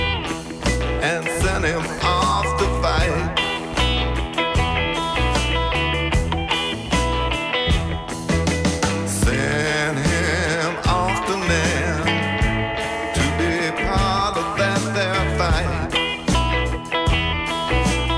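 No technical faults can be heard anywhere in this audio. Nothing in the sound calls for comment on how it was captured, processed or delivered.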